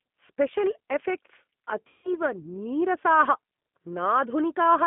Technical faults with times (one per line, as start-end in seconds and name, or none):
0.00-4.87 G.729 codec
1.88-2.11 VoIP packet loss concealed by the speech codec